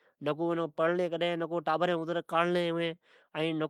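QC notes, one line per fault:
throughout: clock drift between sender and receiver. The sending side's clock runs about 2 percent slower than the receiver's, so the jitter buffer keeps draining and the receiver must stretch what it gets to avoid running dry. The audio therefore plays slightly slow and unsteady, with small stumbles at uneven intervals. On a spectrogram, harmonic tracks show faint breaks or smeared seams instead of smooth contours. On the waveform, periodic cycles look subtly misaligned at those seams.
0.24–3.63 s: repeated timing corrections. Across this stretch the receiver repeatedly inserts short duplicated pieces, all lengthening the audio, so playback runs at about 98 percent speed and gains roughly 70 ms overall. Each insertion is tiny and heard, if at all, as a slight hiccup or a wobbling tempo. On the waveform, short repeated cycle groups appear at irregular spacing. 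On a spectrogram, thin vertical discontinuities and briefly doubled harmonic fragments mark each splice.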